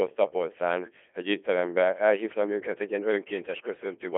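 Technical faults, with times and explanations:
Throughout, Codec 2 vocoder: the speech was cut down to pitch, voicing, energy and spectral envelope and rebuilt from sine waves, heavily, as fits about 2.4 kbit/s. It sounds robotic and buzzy, confined to 250 Hz–3.4 kHz, nothing above 3.8 kHz.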